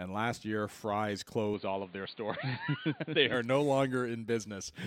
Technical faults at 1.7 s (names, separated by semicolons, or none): input switched to a poorer device